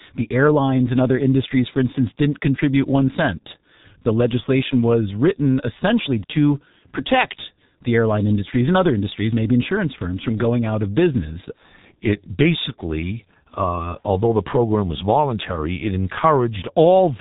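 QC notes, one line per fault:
throughout, G.723.1 codec: the speech has gone through an early internet-telephony codec squeezed to a very low rate, which fits roughly 6.3 kbit/s. It rebuilds the voice from a coarse model refreshed only every 30 ms frame, and it discards everything above 3.8 kHz. The result is heavy damage: a dull, boxed-in tone with no air, a rough, hoarse edge on vowels, and consonants smeared together so that onsets lose their crispness.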